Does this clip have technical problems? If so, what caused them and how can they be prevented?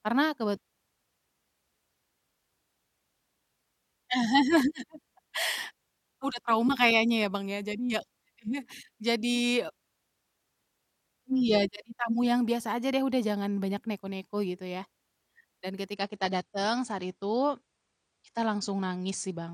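Yes. From 15.95 s to the end of the speech clip, the adaptive stream switches to a lower bitrate. The player dropped to a cheaper encoding when the connection slowed, so there's no gap, just a sudden loss of quality. Nothing above 9.8 kHz survives, so the treble goes dull and codec artefacts creep in, which fits a drop from around 96 kbit/s to roughly 32 kbit/s AAC. To prevent it, give the player more buffer or a steadier connection, or cap how low it's allowed to switch.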